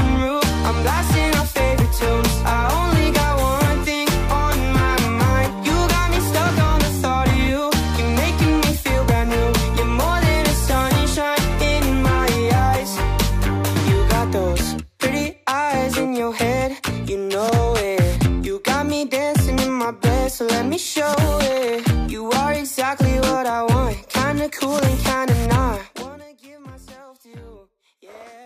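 Zipper noise runs from 25.69 to 26.28 s, where the level falls by roughly 25 dB in 2 dB steps at about 20 per second instead of a continuous ramp. Each jump clicks, so a ticking zip rides on the sound while the level moves.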